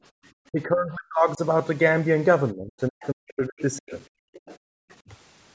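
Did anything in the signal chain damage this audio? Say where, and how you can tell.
Yes, the call-processing stage, specifically the echo canceller, damaged this speech in three ways.

Background gated by the echo canceller: the room tone drops by about 40 dB from 0.11 to 0.23 s and again from 4.2 to 4.89 s, for roughly 100 ms and 400 ms of the affected spans. On a spectrogram the noise floor goes dark in clean-edged blocks. The canceller clamped the microphone while the loudspeaker played.

Speech suppressed in double talk: from 0.51 to 1.4 s and 2.52 to 3.92 s, the talker's level drops, by up to around 40 dB, across most of each span. The waveform shows chopped, notched envelopes, and the spectrogram shows harmonics fading in patches. The likely cause is the canceller mistaking near speech for echo while both sides talked.

Other side's voice leaking through: faint foreign speech appears at 3.0–3.07, 3.59–3.78 and 4.33–4.57 s, about 25 dB below the talker, and at 4.9–4.95 s, about 35 dB below. 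It shows as weak harmonic traces. This is likely residual loudspeaker echo the canceller failed to subtract.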